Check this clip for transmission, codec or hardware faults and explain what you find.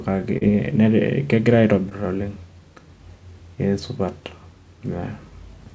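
Two brief dropouts stand out, both of the same kind. Short concealed packet loss occurs at 0.38–0.43 s and 1.89–1.93 s, roughly 40 ms and 20 ms of missing speech. The receiver patched each gap by extending the preceding sound before blending back, heard as a quick smear or wobble. The call path's bandwidth, with nothing above 8 kHz, points to a wideband codec such as G.722.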